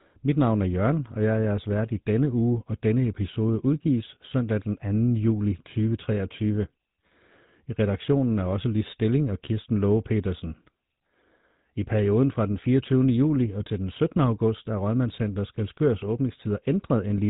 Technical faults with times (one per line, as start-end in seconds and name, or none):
0.00-17.30 GSM full-rate codec